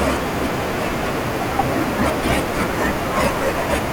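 Nothing in the system gets in the way here; there's just a bit of background from the room sitting about 18 dB under the speech, as you'd expect from where the microphone was.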